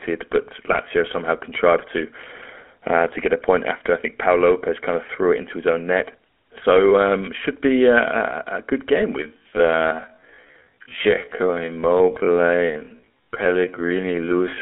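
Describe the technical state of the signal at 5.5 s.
At 5.5 s you're hearing GSM full-rate codec damage, and it runs through the whole clip. The speech is squeezed into a 250 Hz to 3.4 kHz phone band and rebuilt from a vocal-tract model fed by sparse pulses, consistent with 13 kbps full-rate coding, so it comes out plainly buzzy and gravelly.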